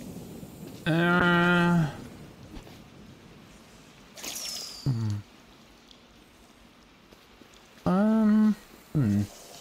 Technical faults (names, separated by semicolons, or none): call bitrate drop